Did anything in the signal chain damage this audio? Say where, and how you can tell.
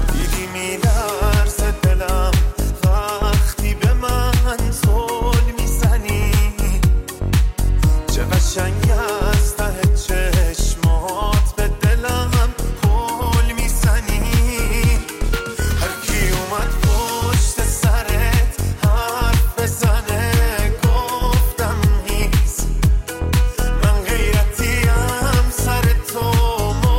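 No, nothing in the signal chain stood out as having damaged this audio on listening.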